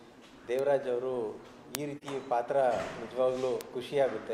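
At 0.59 s a bit error spike produces one sharp broadband tick. A single flipped bit in one sample shifted its value by a power of two, and the next sample snapped straight back. A two-sample spike at 1.75 s sounds the same.

From 1.97 to 2.03 s, AAC frame loss with muting opens a brief dip of about 43 ms, which fits one missing frame. The decoder zeroed that spectrum, and the overlapping windows faded the sound down and back up. A final bit error tick follows at 3.61 s.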